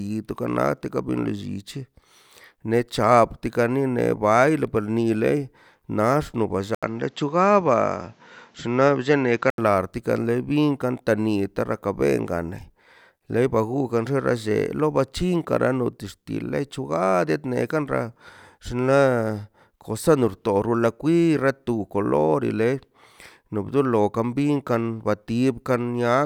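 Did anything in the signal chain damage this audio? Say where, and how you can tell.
Yes. Between 6.75 and 9.58 s the speech turns duller, with nothing above 7.7 kHz, and a different background noise appears, roughly 35 dB below the speech, while the level stays about the same. An 80 ms silence marks the switch. This is most likely an input switched to a poorer device at the driver stage. A codec bandwidth drop would keep the same noise floor and wouldn't leave a gap. Here the noise character changes along with the band.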